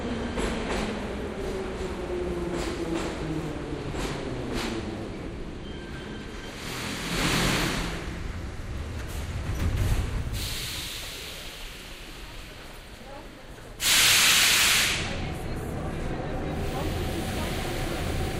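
No technical faults can be heard anywhere in this audio.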